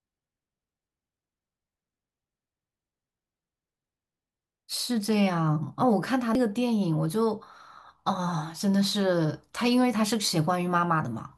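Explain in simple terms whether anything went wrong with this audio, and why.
Something did go wrong: there is damaged data in a compressed stream at 6.35 s. A tiny piece of the stored file was corrupted, so when the player tried to unpack that spot it got nonsense, lost its place, and had to hunt for the next clean section to resume. To a listener this comes out as a very brief glitch in the speech, lasting only a few thousandths of a second, before the sound carries on.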